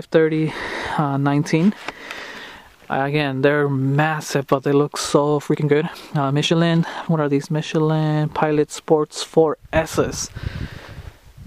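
From 5.48 to 7.48 s the audio suddenly rushes ahead, hurried at about 1.52 times normal pace, yet its pitch stays put. This is a time-stretched section, likely software squeezing the passage to fit a shorter length by dropping short pieces.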